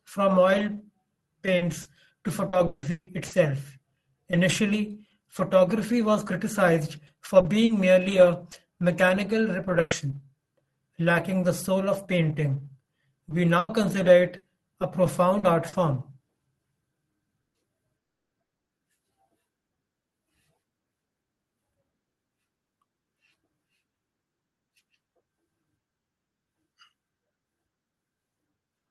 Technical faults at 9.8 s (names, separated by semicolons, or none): burst of packet loss